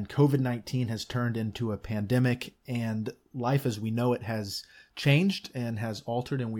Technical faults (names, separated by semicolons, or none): none